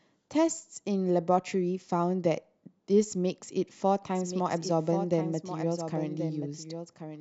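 From 4.15 s, a slower second capture path likely adds a doubled audio track: a full-band copy about 10 dB quieter trails around a second behind.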